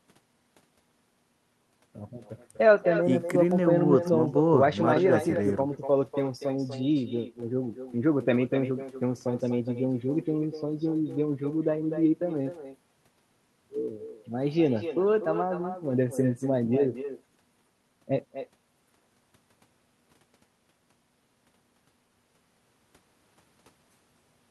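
From start to finish, every phrase gets shadowed by a fainter copy arriving roughly a third of a second later. That's echo with no canceller: the far end is playing the call over a loudspeaker, their microphone picks it back up, and nothing subtracts it before it travels back to us. The returning copy sits about 10 dB below the direct speech and sounds thinner, so the talker seems to be trailed by their own ghost.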